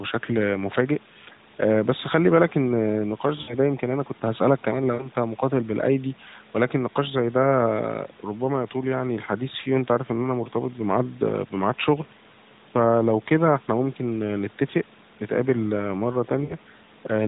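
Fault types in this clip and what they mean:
Lost AMR speech frames: radio errors corrupted frames so they failed their checksum, and the decoder bridged each gap by repeating the last good pitch and vocal tract settings at falling gain. This happens at 3.42 to 3.55 s, 4.94 to 5.09 s and 16.44 to 16.54 s. Each gap of about 60 ms fits three lost 20 ms frames, and the speech smears into a brief drawn-out warble that sags in level.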